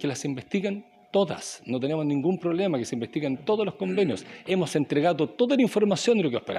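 Nothing here trips any alarm; the clip runs its course without a single glitch or dropout catching the ear.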